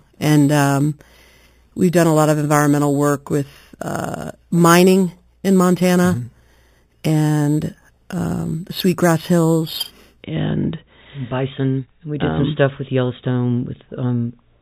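Sample-and-hold upsampling has left imaging from 0.0 to 10.23 s: the audio points to an 8 kHz source raised to 44.1 kHz by repeating each sample with no smoothing filter. The lowest mirrored copy of the spectrum folds into the 4 to 8 kHz band, about 18 dB below the signal, adding a bright metallic fizz that swells and fades with the sound and moves opposite to its pitch.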